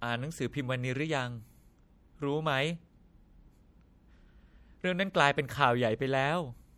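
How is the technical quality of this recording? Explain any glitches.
The technical quality is compromised by plainly audible codec damage across the whole speech recording. The fault is MP3 compression, present throughout. The likely cause is a low-bitrate encode, which fits around 64 kbps: the encoder drops weak frequency lines that flicker between frames, giving a watery, swirly texture, metallic chirps on s sounds and smeared consonant attacks.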